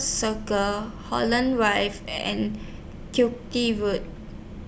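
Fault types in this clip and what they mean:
The speech signal shows no audible technical faults anywhere in the recording.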